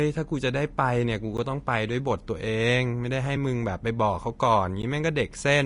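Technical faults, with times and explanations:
Throughout: Vorbis compression. The encoder has likely been run at a low quality setting, so too few bits are left for the upper spectrum. The band is cut off sharply at 10.6 kHz, and the treble that remains is quantised so coarsely that fine detail becomes hiss of similar energy. The speech sounds grainy and rough, with consonant onsets softened. This is plainly audible and fits a bitrate in the region of 36 kbps.
1.37, 3.36 and 4.82: block of digital silence. At each moment a run of samples dropped straight to silence and then snapped back with no fade. The gaps at 1.37 and 4.82 last about 11.6 ms, which fits a 512-sample block, and they come across as ticks or dips. The one at 3.36 lasts about 2.9 ms, which fits a 128-sample block, and it is heard as a brief tick.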